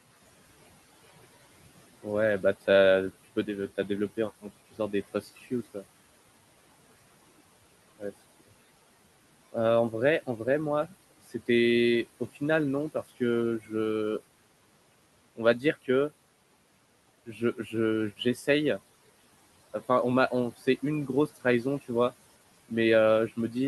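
At 5.12–5.46 s, 13.60–13.71 s and 17.26–17.74 s, speech cut by the noise suppressor mistakes quiet speech for the room noise, which sits about 20 dB below, and turns it down by about 17, 12 and 12 dB. Brief stretches sound swallowed, showing as sudden envelope dips and faded spectrogram energy.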